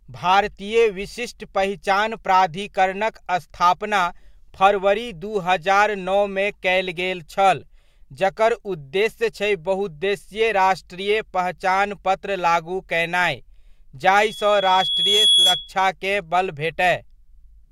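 From 14.15 s to 15.76 s the speech is overtaken by loudspeaker feedback squeal: a single tone near 3.4 kHz that swells over roughly a second until it sits a few decibels above the voice. The microphone is hearing its own loudspeaker, and at that frequency the loop gain has passed one, so the tone feeds itself. Unlike a steady electrical whine or test tone, it starts faint and climbs on its own.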